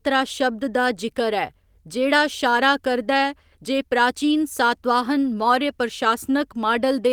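No faults found in this speech, which is carried by Opus voice compression at 24 kbps in hybrid mode, fullband, with only light codec damage and content reaching up to about 20.4 kHz.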